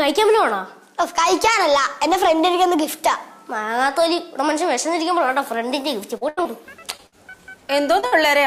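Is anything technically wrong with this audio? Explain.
Yes. Packet loss strikes repeatedly in the last two and a half seconds.

Short concealed packet loss occurs at 6.17 s (about 40 ms) and at 6.43 s, 6.97 s and 8.00 s (about 20 ms each). Those slices never arrived in time, so the decoder extended the preceding sound to bridge each gap and then blended back into the real signal. Each one is heard as a brief smear or wobble, and a very short sound can drop out entirely.

A burst of packet loss hits at 6.29 to 6.39 s (about 80 ms), 7.07 to 7.14 s (about 60 ms) and 8.06 to 8.14 s (about 60 ms). Several consecutive packets went missing, so the receiver kept continuing the last sound while fading it down. The result is a held buzz or a dwindling hiss, after which the audio resumes with that stretch gone.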